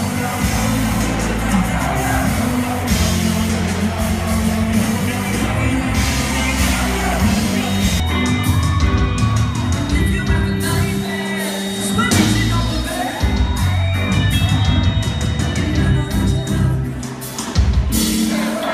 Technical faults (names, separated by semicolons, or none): feedback whistle